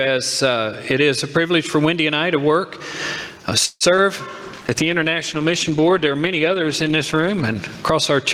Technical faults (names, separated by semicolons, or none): gain pumping; call audio freeze; short concealed packet loss; call bitrate drop